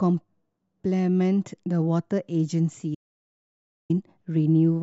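At 2.95 s the speech cuts off abruptly into total silence, with no room tone, until 3.90 s, losing about 0.95 s of material. This is an audio dropout to silence, likely from the input signal being lost while recording continued writing silence.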